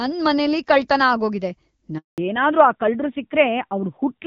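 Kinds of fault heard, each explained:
Handover gap: The call was passed from one network to another, and for about 200 ms no speech frames got through while the link switched over. Just after "ಮನೆಲಿ ಕಳ್ತನ ಆಗೋಗಿದೆ", at 1.98 s, the voice dies away within a few tens of milliseconds and stays silent until 2.18 s, when the new connection begins carrying speech again. Whatever was said in that gap is simply missing.
Fallback to narrowband: After the handover, the new link could not keep HD Voice, so the call dropped to an older narrowband codec. From 2.18 s to the end, everything above 4 kHz is gone. The voice sounds duller and rougher than before the gap, where the wideband coding was clear with only light codec damage. The extra harshness points to a low narrowband rate, around 7.4 kbit/s.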